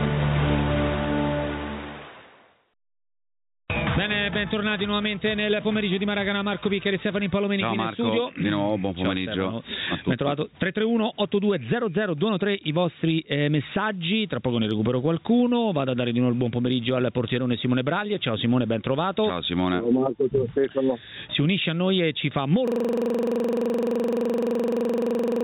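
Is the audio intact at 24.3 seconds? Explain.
No. At 24.3 s the audio is caught in a system hang loop: a 42.67 ms fragment repeats at 23.4 Hz from 22.68 s to the end, heard as a machine-gun stutter. The computer stalled while the hardware kept replaying one ring buffer, which fits a 2048-sample buffer.

Underneath, gain pumping persists: loud and soft parts sit closer in level and the sound is squashed, with level swings of around 20 dB. The likely cause is gain set far too high, with a fast limiter clamping it down on every peak.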